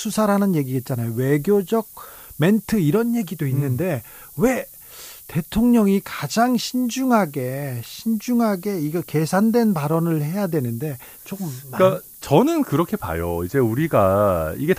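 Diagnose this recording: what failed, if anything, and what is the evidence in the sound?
The sample-format conversion reduced the speech to 7 bits with noise shaping, feeding the rounding error back so it is pushed upward in frequency. Throughout the clip a steady, thin hiss sits only roughly 15 dB below the speech and climbs steeply toward the top of the band.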